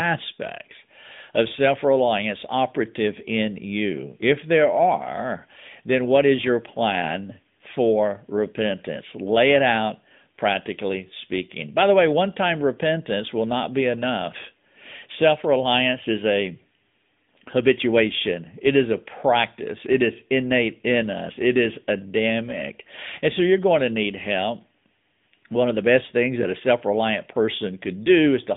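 Throughout the recording the speech carries AMR narrowband mobile codec damage, consistent with a mode around 10.2 kbps. Content is confined to roughly 150 Hz to 3.6 kHz, with nothing above 3.7 kHz, and the vocal-tract model produces a plainly audible buzzy, synthetic edge.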